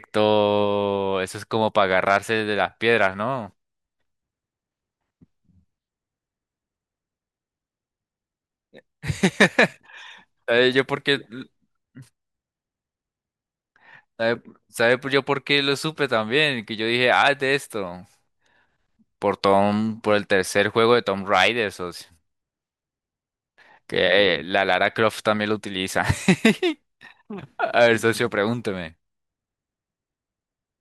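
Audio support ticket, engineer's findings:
No faults found in the engineer's findings for this audio support ticket.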